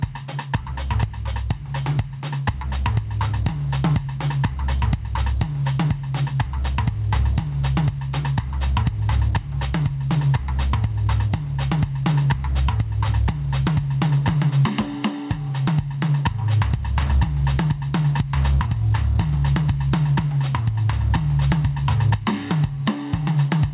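The music pumps throughout: the gain ducks by roughly 10 dB under each loud passage, leaving everything squashed. This is gain pumping, likely from input gain set far too high with a fast limiter clamping down. Unlike a noise gate, the quiet parts are lifted rather than cut to silence. The narrow band, with nothing above 4 kHz, comes from the call codec.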